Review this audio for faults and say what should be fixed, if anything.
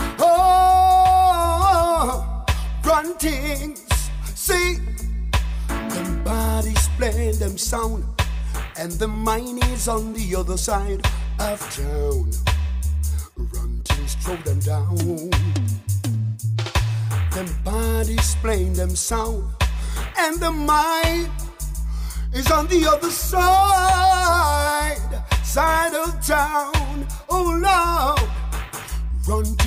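Nothing stood out on listening, so there is nothing here that needs fixing.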